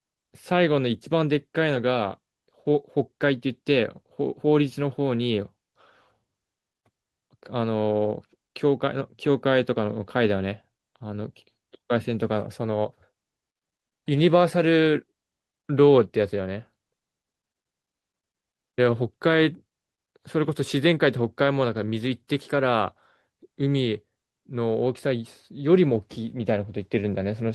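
No technical faults can be heard anywhere in the speech recording, which keeps a steady, continuous signal throughout.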